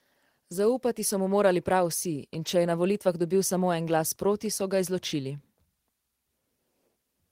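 A speech recording, and nothing is technically wrong with it at any point.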